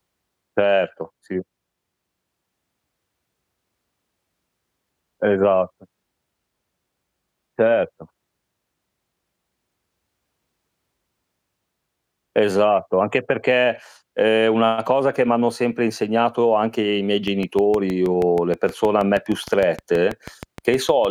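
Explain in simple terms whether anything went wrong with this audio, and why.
Near the end, from 17.28 s until the clip finishes at about 21.06 s, a train of clicks runs over the speech: a steady ticking of roughly six clicks per second, about thirty in all, each much the same and evenly spaced. They stand out clearly above the voice and carry on through pauses. The likely cause is electrical interference from nearby equipment or a faulty connection or power supply injecting a pulse at a regular rate.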